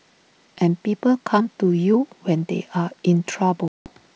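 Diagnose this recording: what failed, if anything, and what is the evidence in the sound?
Network: packet loss on an ADPCM call. A hard 180 ms silence at 3.68 s, then slightly distorted speech as the decoder resyncs, unlike a clean dropout.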